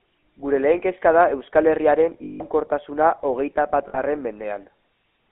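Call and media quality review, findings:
GSM full-rate codec, whole clip: buzzy, gravelly speech, band-limited to roughly 250 Hz–3.5 kHz. Spectrogram shows a hard ceiling and smeared harmonics. Pulse-excited vocal-tract model, consistent with 13 kbps full rate.

Lost GSM frames at 2.24–2.43 s (about 160 ms) and 3.88–3.99 s (about 60 ms): rough metallic ring. Last good frame was repeated, visible as frozen spectral bands.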